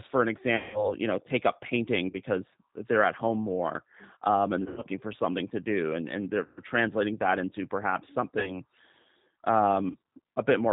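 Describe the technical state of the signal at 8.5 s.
Packet loss concealment runs from 8.39 to 8.60 s, just after "translating that into perhaps". About 40 ms of audio, consistent with two lost packets, was extrapolated from the last pitch and filter into a fading buzzy tone or coloured noise rather than leaving a silent gap, and the voice stays weak until about 8.6 s.

Underneath, the G.729 codec at 8 kbit/s is plainly audible. Its synthetic roughness and missing content above 4 kHz persist throughout, unlike the brief concealment artefact.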